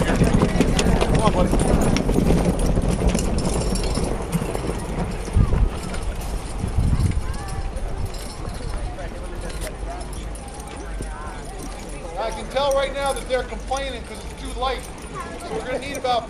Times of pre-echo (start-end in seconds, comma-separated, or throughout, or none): none